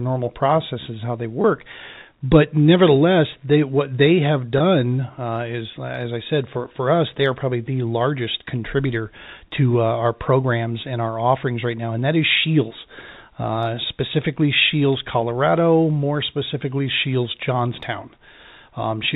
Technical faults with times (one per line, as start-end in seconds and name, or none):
1.42-1.44 packet loss with pitch repetition
4.58-4.60 packet loss with pitch repetition